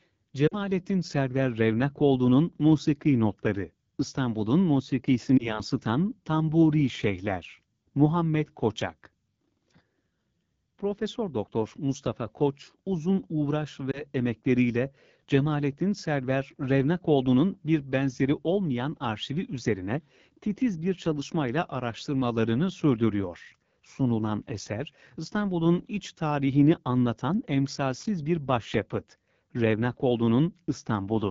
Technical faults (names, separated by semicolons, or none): AMR wideband (HD Voice) codec; lost AMR speech frames